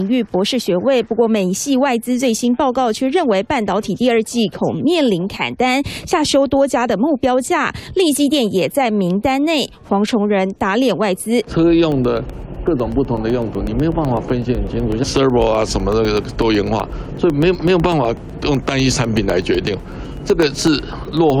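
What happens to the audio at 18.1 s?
At 18.1 s you're in the middle of a run of periodic USB or driver dropouts, lasting from 11.92 s to 21.3 s. Every 0.125 s something stalls the bus or driver. Roughly a millisecond of audio goes missing and is replaced by silence, so you hear a steady ticking while there's signal.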